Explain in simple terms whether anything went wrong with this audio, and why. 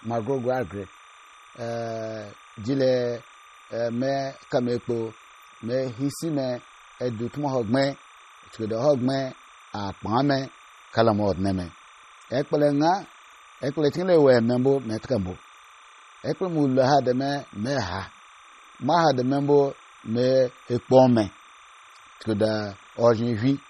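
Two things went wrong, and both run from the start of the recording to the end.

The first is timecode bleed. Timecode is a synchronising signal that video and audio gear use to keep in step. Here it ran at 29.97 frames per second and leaked from a nearby track or cable into the speech recording. Because the code flips rapidly between two tones, at about 1 kHz and 2 kHz, it sounds like a faint, steady chirping warble sitting quietly behind the speech the whole time.

The second is damage that was likely caused by MP3 compression. To shrink the file, the encoder threw away everything above about 15.2 kHz and discarded sound it judged less important. The damage here is heavy. The speech sounds watery and swirly, the s sounds turn metallic and chirpy, and the starts of sounds are smeared instead of crisp. This happens because quiet detail keeps switching in and out from one moment to the next.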